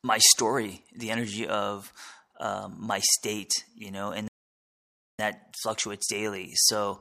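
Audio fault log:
4.28–5.19 s playback stall: the speech drops to silence for about 910 ms, then carries on, likely the player running dry or its thread blocking.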